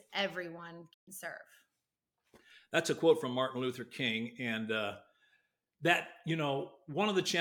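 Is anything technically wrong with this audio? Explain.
Yes. From 0.92 to 1.09 s there is a digital broadcast dropout: the receiver stopped getting valid frames and muted until clean ones arrived. The speech fades out over 20 ms into silence, losing 128 ms of programme, which fits four missing frames, then resumes further on.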